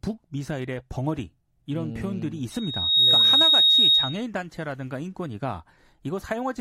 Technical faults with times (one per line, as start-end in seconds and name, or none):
2.51-4.25 loudspeaker feedback squeal